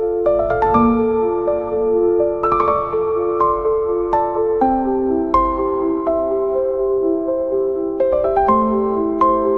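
Sample clock jitter runs through the whole clip: the converter's clock wanders by around half a microsecond, so samples land slightly off time. The error, roughly 55 dB below the signal, follows waveform slope, adding faint hiss on loud, bright passages that disappears in silence.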